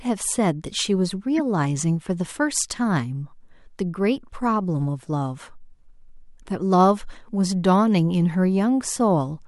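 A corrupt frame decoded at 1.38 s: damaged bits in the compressed stream, likely spanning about two frames, were played as if valid, so misread gains and codes put energy in the wrong frequencies. It is heard as a brief chirp, squeak, blip or burst of noise peaking around -20 dBFS.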